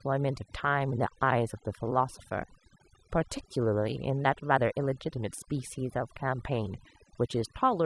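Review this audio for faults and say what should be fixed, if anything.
Overdone noise removal runs through the whole clip. Bands near the noise floor are cut away, leaving near-silent gaps with twinkling specks. Prevent it by setting noise reduction gentler.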